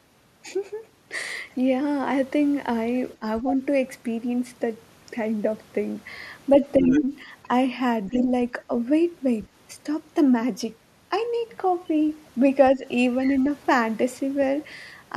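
The echo canceller likely could not separate the two sides talking at once, so speech is suppressed in double talk: the voice dips by around 10 dB at 3.19–3.61 s, more gently at 6.59–7.29 s, then again at 8.1–8.24 and 12.75–12.84 s. The same canceller likely leaves part of the loudspeaker signal in the microphone, so the other side's voice leaks through as scraps about 10 to 15 dB below the speech at 3.49–3.55, 6.81–7.01, 8.08–8.24 and 13.23–13.38 s.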